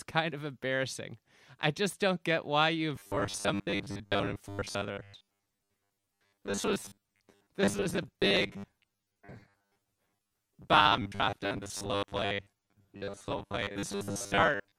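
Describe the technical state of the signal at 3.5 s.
At 3.5 s, robotic sound from repeated short buffers, running from 2.96 s to the end, imposes a fixed 100 Hz buzz, likely from about half the audio being replaced by repeated 10 ms chunks. Unlike a pitch shift, this buzz stays constant regardless of intonation.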